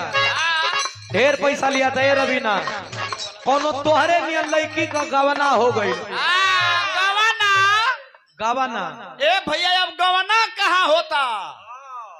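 The audio has a call bitrate drop from 2.63 s to 4.01 s. The call's encoder was pushed to far fewer bits, which fits a fall from 96 kbps to about 12 kbps. For 1.32 s the sound turns coarse and muffled, with its top end cut from 20 kHz to 8 kHz. It clears at 4.01 s.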